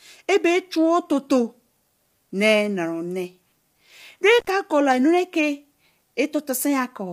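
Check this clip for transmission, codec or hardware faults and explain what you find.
Two faults stand out: plainly audible low-delay coding across the whole clip, and a brief dropout from an intermittent contact near the middle.

Low-delay AAC compression runs throughout, likely AAC-ELD. That coder works in very short frames, so it cannot separate closely spaced pitch harmonics well and spends its bits inefficiently. The damage here points to a rate around 32 kbps. The speech sounds rough and grainy, with noise filling the gaps between harmonics, and nothing remains above 15.7 kHz.

An intermittent contact opens from 4.39 to 4.47 s. A loose plug or cable briefly breaks the signal path for about 68 ms, so the speech cuts out abruptly. Crackle marks both edges as the contact breaks and remakes, and only faint residual noise fills the gap.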